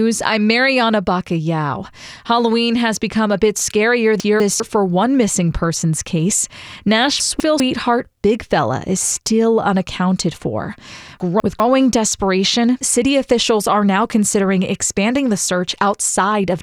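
A speech recording with chunks out of order at 4.2 to 4.6 s (after "become a bit scarier"), 7.2 to 7.6 s, and 11.2 to 11.6 s (after "is still unaccounted for"). In each, a 200 ms chunk plays one chunk late, swapped with its neighbour, giving a jumbled moment bounded by hard joins.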